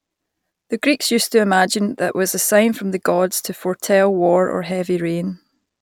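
No dropouts, clicks, distortion or level jumps turn up anywhere in the recording.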